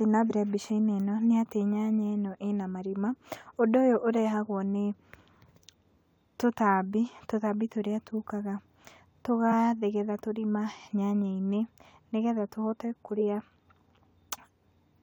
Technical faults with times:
0.29 compressed frames skipped
9.51 compressed frames skipped
13.15-13.21 compressed frames skipped

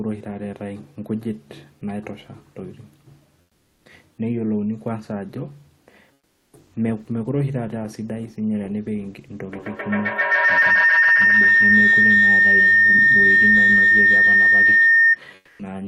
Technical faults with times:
3.41-3.85 comfort noise in place of the background
6.13-6.53 comfort noise in place of the background
9.52-15.24 feedback howl
15.35-15.59 comfort noise in place of the background

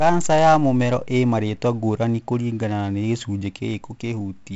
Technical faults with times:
0.00-4.56 4-bit ADPCM compression

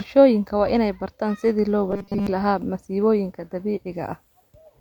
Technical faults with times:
1.91-2.27 robotic sound from repeated short buffers

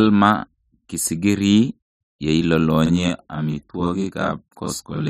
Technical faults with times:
2.86-5.10 channel delay (doubling)

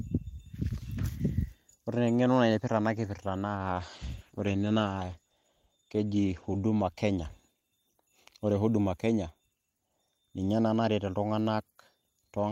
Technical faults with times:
3.56-6.75 call bitrate drop

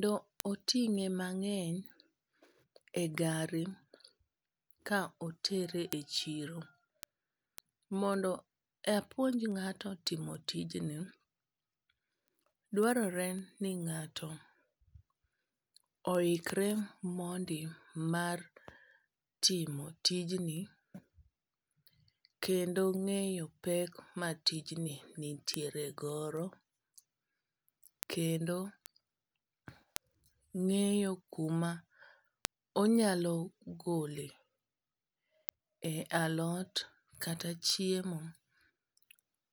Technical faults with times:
0.13-39.36 word clock ticks

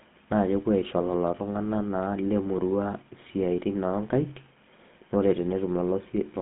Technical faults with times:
0.00-6.42 GSM full-rate codec

